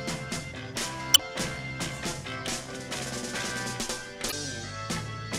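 Damaged data in a compressed stream breaks the audio at 1.11 to 1.20 s and 4.28 to 4.33 s. The decoder misreads corrupted frames and loses sync. Each break is a brief disruption.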